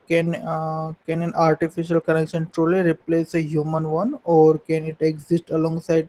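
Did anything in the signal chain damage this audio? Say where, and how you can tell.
Yes. The codec stage shows Opus voice compression for the whole clip: speech sounds hoarse and faintly robotic, with the linear-prediction core coding excitation coarsely and a layer above 8 kHz. That fits a low rate near 16 kbps. The damage is steady, never bursty gaps like packet loss.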